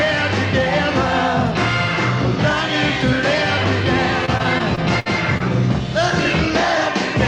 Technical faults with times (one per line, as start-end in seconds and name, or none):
4.25-5.42 repeated packet loss (robotic sound)